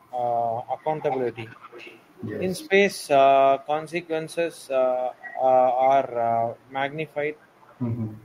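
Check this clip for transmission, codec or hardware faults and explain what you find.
One fault type recurs: echo leak, at 0.86–2.07, 4.03–4.09, 4.32–4.69, 5.15–5.39, 6.55–6.72, 7.07–7.14 and 7.38–7.79 s. A faint copy of the speech trails it by 400 ms, roughly 20 to 40 dB down, likely from a far-end loudspeaker whose echo canceller let residue through. On a spectrogram, weak ghost harmonics repeat each syllable's pattern 400 ms later.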